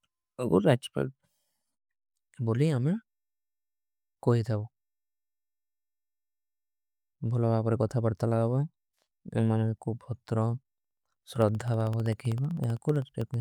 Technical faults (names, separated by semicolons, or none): periodic USB or driver dropouts